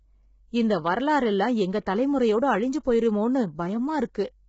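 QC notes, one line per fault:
throughout: low-delay AAC compression, heavy. The speech sounds rough and grainy, with noise filling the gaps between pitch harmonics and nothing above 7.7 kHz. This points to AAC-ELD at a low bitrate, around 16 kbps. Its short frames resolve harmonics poorly and leave too few bits for the top band.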